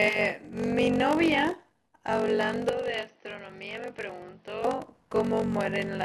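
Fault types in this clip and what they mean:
Block size mismatch (padded): One stage hands over shorter blocks than the next stage reads, and the leftover space in each block gets filled with zeros, so there's a tiny gap in every block. Here it runs the whole way through as a steady buzz at 46.9 Hz, which fits a 1024-sample read block. The speech also plays slower, at about 0.86 of normal speed, but the pitch stays about where it should be.
Input switched to a poorer device: From 2.69 to 4.65 s the speech suddenly turns duller and narrower, then opens back up. Over that stretch the level drops by around 10 dB, and a new background noise appears, sitting well below the speech. There's no silent gap at either change. That pattern likely means the input jumped to a lesser microphone or headset and then came back.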